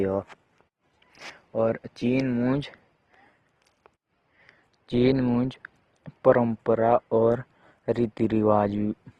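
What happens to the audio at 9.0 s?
At 9.0 s the speech sounds rough and grainy, with nothing above 12.1 kHz, as it does for the whole clip. The likely cause is Opus compression at a low rate, around 16 kbps, where the music-mode encoder fills starved bands with folded or noise-like energy.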